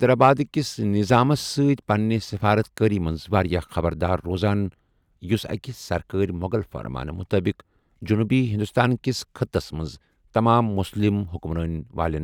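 No faults are audible anywhere in the recording.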